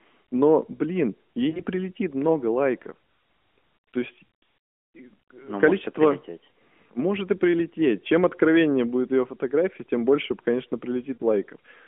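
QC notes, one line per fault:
1.50–1.63 s, lost AMR speech frames: after "блин ей", corrupted radio frames failed their checks, so the decoder reused the last good pitch and vocal-tract settings at falling gain. The speech smears into a brief warble before "прилетит много лайков" returns rough for a moment. The gap is about 40 ms, consistent with two 20 ms frames.
11.14–11.24 s, lost AMR speech frames: after "фотография тем больше конечно", a longer concealment stretch of about 60 ms, consistent with three frames, drags out and fades, leaving a short dip in the narrowband speech.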